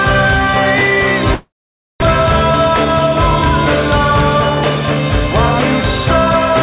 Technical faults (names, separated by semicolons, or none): long network dropout